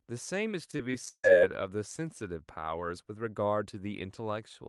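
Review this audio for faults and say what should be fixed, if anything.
Repeated packet loss (robotic sound) affects the speech from 0.71 to 1.28 s. Six gaps fall in that half second. The longest lasts 150 ms. Each hole is patched by stretching the last stretch of sound forward, so about 40% of the span is filled-in rather than real. The speech turns choppy, with pieces missing. To fix it, improve the network path or enlarge the jitter buffer and add packet-loss resilience such as forward error correction.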